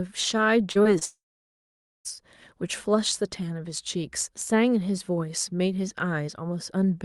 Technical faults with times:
0.71-1.03 short concealed packet loss
1.05-2.07 long network dropout

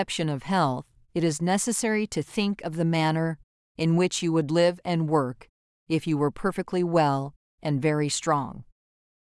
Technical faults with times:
none

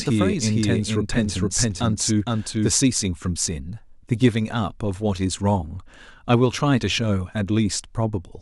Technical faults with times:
0.00-2.70 doubled audio track

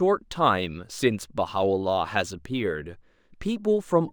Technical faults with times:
0.00-4.12 imaging from linear upsampling

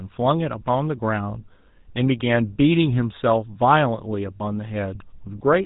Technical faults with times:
0.00-5.65 GSM full-rate codec
4.36-4.44 lost GSM frames

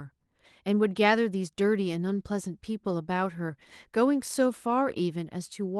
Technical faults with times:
none

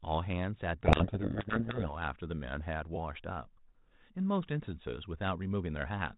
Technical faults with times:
0.83-1.95 codec payload misread

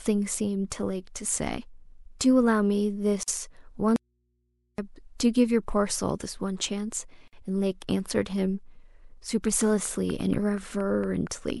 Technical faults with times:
3.23-3.28 gap at a join of encoded pieces
3.96-4.78 audio dropout to a faint residue
7.28-7.33 gap at a join of encoded pieces
9.61-11.51 train of clicks

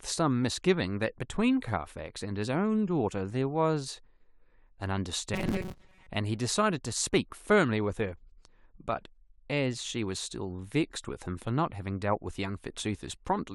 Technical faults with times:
5.34-6.08 robotic sound from repeated short buffers

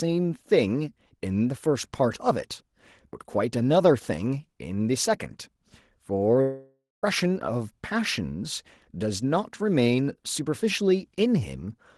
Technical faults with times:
6.41-7.04 long network dropout

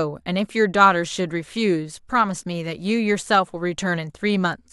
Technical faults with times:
none

